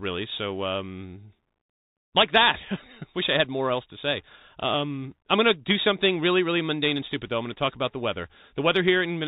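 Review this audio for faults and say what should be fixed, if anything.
The speech sounds narrow and boxy throughout, with nothing above 4 kHz, a granular hiss underneath, scratchy s sounds and roughness on loud bright moments. That is the Bluetooth CVSD headset codec: one-bit up-or-down steps, consistent with 64 kbps, can't follow fast changes. Record through a wideband microphone path rather than a headset's voice link.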